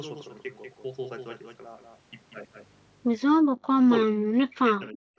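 From 3.42 to 3.52 s the echo canceller clamped the microphone while the loudspeaker played, so the background sound was gated, dipping by about 30 dB before returning. Between 3.8 and 5.18 s the speech is suppressed in double talk, most likely because the canceller could not separate the talker from loudspeaker echo; the speech is turned down, dropping by roughly 40 dB for about a second in total.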